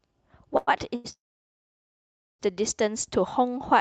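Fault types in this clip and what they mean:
Short stall from a late packet: at 0.57 s and 0.95 s, sound is held about 0.1 s, showing as smeared, unchanging bands on a spectrogram.
Call audio freeze: from 1.12 s to 2.41 s the sound stops, nearly all silent, likely from delayed packets. The waveform shows a long flat gap, then resumes.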